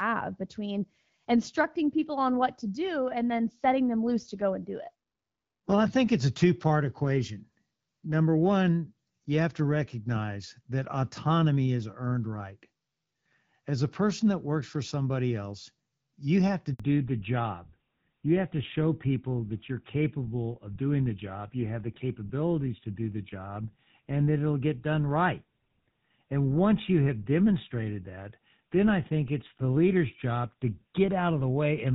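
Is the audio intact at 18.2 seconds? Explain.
No. At 18.2 seconds the speech is in a fallback to narrowband. It begins at 16.8 s, just after "else you have to", and lasts to the end at 31.9 s. Before that point the call runs on the AMR wideband (HD Voice) codec, which fits 12.65 kbit/s. Then it switches to an older narrowband codec, which fits GSM full rate. Nothing above 4 kHz survives. The voice sounds duller and rougher.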